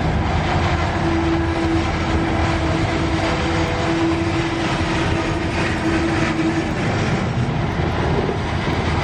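From 0.65 s to 8.73 s, a click repeats every 1.01 s, about ten in all. This is clock drift buffer slips, likely from two devices whose clocks differ by a few hundred ppm. Each slip drops or repeats a tiny block of samples.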